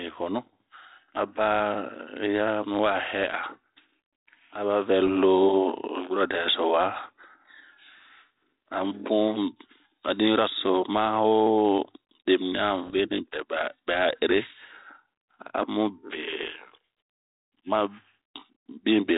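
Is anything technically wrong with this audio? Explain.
Yes. The speech runs over an ADPCM link, whose cut-off near 4 kHz points to G.726 at about 32 kbit/s, and that link suffers bit errors at 5.06 to 5.09 s and again at 12.87 to 12.98 s. A small fraction of a percent of bits arrive flipped. Each wrong bit knocks the decoder's adaptive step size and predictor off track, so the damage rings on for several milliseconds before it settles. This is heard as pops and short, rough bursts with brief jumps in level, and the second burst lasts longer than the first.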